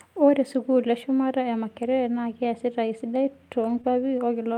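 Around 3.65 to 3.79 s you hear a lost packet rebuilt from error correction. About 80 ms of audio arrived only as the low-bitrate backup copies carried in the following packets, so there's no gap, just a stretch that sounds rougher and a bit noisier than the surrounding speech.

Right after, from 3.81 to 3.85 s, there's a short concealed packet loss. About 20 ms never made it in time, so the decoder extrapolated from the last sound and blended back, which comes across as a quick smear or wobble.

At 3.85 s another lost packet is rebuilt from error correction. This one covers only about 20 ms and has the same coarse, grainy texture as the earlier patch, tacked straight onto the end of the concealed bit.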